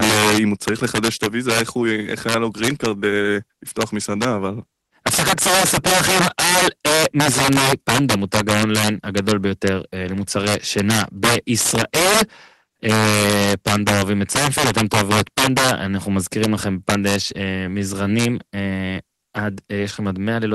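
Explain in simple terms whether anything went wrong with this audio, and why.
Integer overflow runs through the whole speech recording. The loudest moments were pushed past the biggest number the digital audio can hold. Instead of being capped there, those values wrapped around to the opposite extreme. About one sample in fifty is affected, so loud peaks turn into sudden, harsh cracks, much sharper than ordinary distortion. Quieter passages escape, and the call codec the audio passed through adds its usual coding noise and cuts off the very highest frequencies.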